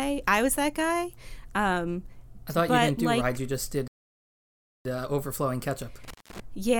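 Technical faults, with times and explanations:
3.88 to 4.85 s, playback stall: the speech halts mid-flow and the output falls completely silent for about 0.97 s before resuming. The likely cause is the player running out of data, or its thread being blocked, until it could recover.
6.04 to 6.40 s, intermittent contact: the sound drops out with crackle at the edges, the signal gone for about 0.17 s. This comes from a loose cable or plug briefly losing connection, with the contacts scraping as they part and meet again.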